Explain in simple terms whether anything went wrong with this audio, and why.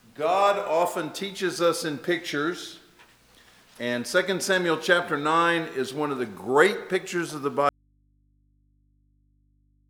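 At 7.69 seconds the sound suddenly cuts out, and for the last two seconds only a faint low hum remains. This is an audio dropout to a faint residue: the signal was most likely lost along the way while the line itself stayed connected, picking up hum.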